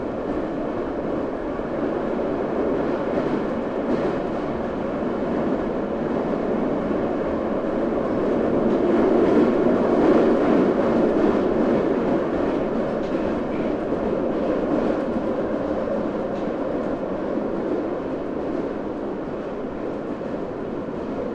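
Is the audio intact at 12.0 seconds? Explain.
Yes, the sound at 12.0 seconds is intact, with no fault present at that moment.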